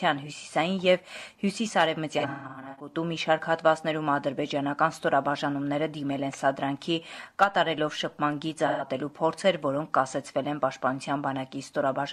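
Around 2.19 to 2.94 s there's AAC frame loss with concealment: chunks totalling about 0.43 s drop out across roughly 0.6 s, longest run around 150 ms, and the decoder patches them from the last good spectrum, so it smears and goes phasey. Again at 8.67 to 8.86 s, a shorter 128 ms patch.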